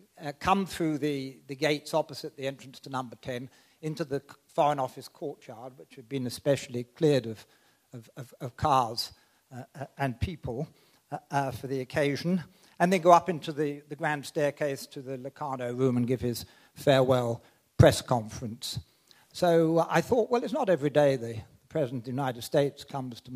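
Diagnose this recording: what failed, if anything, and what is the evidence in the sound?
Nothing stood out on listening through this recording that would point to a failure at any stage.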